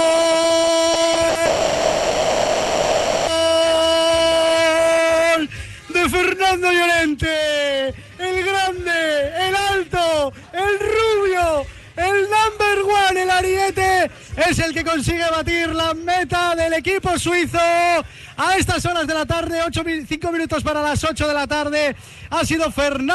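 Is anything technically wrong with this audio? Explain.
Yes. Four packet-loss faults cluster in the opening seconds of this call recording, which passed through an Opus call path whose top end stops near 12 kHz.

The first two are short concealed packet losses, at 0.93 to 0.97 s and again at 1.13 to 1.17 s. In each, about 20 ms of audio failed to reach the decoder in time, so the receiver patched the hole by extending the preceding sound and then crossfading back into real audio. Each is heard as a brief smear or wobble. They differ from a burst by their length: too short to build into a held tone.

A burst of packet loss follows at 1.29 to 1.37 s. Here about 60 ms went missing in a row, long enough that the concealment is audible as a sustained sound. It becomes a short held buzz or fading hiss that dims as the gap runs on. The audio then picks up further along, with that stretch skipped. 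The length separates it from the smears just before it, and its quick recovery separates it from a dropout.

The last fault, a long network dropout, runs from 1.45 to 3.29 s. For about 1.8 s the sound is replaced by a continuation of what came before it, fading as a buzz or hiss and never reaching true silence. Normal audio resumes at 3.29 s with the intervening material gone. The likely cause is that no packets arrived at all for that span. Its length of nearly two seconds marks it apart from the brief burst and concealed gaps.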